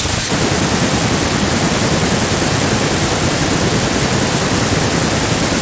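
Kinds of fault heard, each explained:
No faults can be heard in this speech recording. It has passed through call microphone processing, which trims away the lowest bass and leaves nothing above 8 kHz, and that is normal for such a path.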